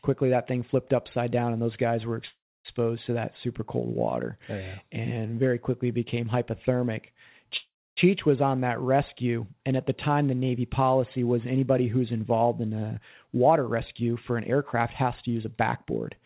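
At 2.28 s, right after "and those guys were", there's a call audio freeze: a brief buzzy fade into about 0.27 s of silence, then the speech resumes at 2.67 s with "to that super cold", nothing lost, just a 0.37 s gap. The likely cause is late packets draining the jitter buffer. The same thing happens from 7.57 to 7.99 s, between "very quickly became hypothermic" and "was on that rescue," with a 0.40 s gap including about 0.28 s of silence.

From 12.62 s, just after "was anybody who's involved", to 16.18 s there's a jitter buffer speed-up. The receiver trims pitch-period slices to shed excess buffered delay, about a fifth of a second in total, so the speech runs roughly 7% fast at unchanged pitch and feels a bit rushed. The audio has nothing above 4 kHz throughout, which fits a 64 kbps G.711 mu-law call path.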